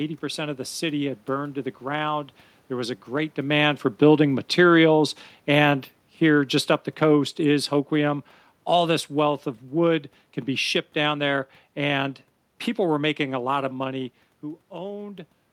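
From 3.41 s, just after "was a great", the speech starts to sink steadily, and the room noise behind it drops by the same amount. By 12.07 s, where "people were making a" follows, the level has fallen by about 9 dB. This is automatic gain falling: the gain control judged the input too loud or its background noise too strong and pulled its gain down gradually, taking voice and background with it, unlike the talker's own movements near 3 s and 13.5 s.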